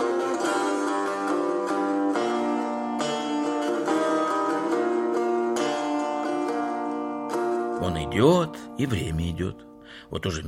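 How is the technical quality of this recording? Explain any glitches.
No glitches or technical faults can be heard anywhere in the recording; the signal stays continuous and stable throughout.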